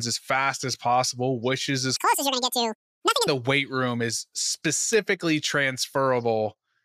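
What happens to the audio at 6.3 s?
At 6.3 s the speech continues intact, with no audible fault at that moment.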